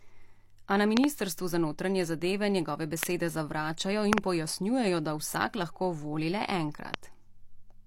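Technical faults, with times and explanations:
0.97 to 6.96 s, loud pop: sharp pops at 0.97–1.06 s (a pair), 3.03–3.05 s, 4.13–4.20 s (a pair) and 6.94–6.96 s, about 20 to 25 dB above the speech, which continues underneath. Each is likely a voltage spike from a switch, static or driver glitch, shaped into a short thump.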